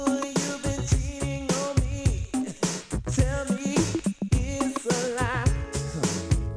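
No technical faults can be heard anywhere in this clip.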